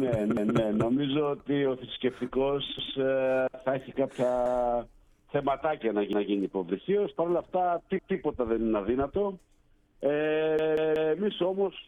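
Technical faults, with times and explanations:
0.37 to 0.56 s, 2.79 to 2.97 s, 4.46 to 4.64 s, 6.13 to 6.32 s and 7.99 to 8.17 s, repeated buffer: each time, a piece of about 186 ms plays once more straight after itself, with a hard join where it restarts. This fits an 8192-sample buffer being replayed when fresh audio failed to arrive. The piece is long, so it comes across as a clear stutter rather than a click, and nothing seems skipped.
10.59 to 11.15 s, repeated buffer: the same 186 ms piece sounds three extra times in a row. That gives a longer, rhythmic stutter with a hard edge at each of the joins.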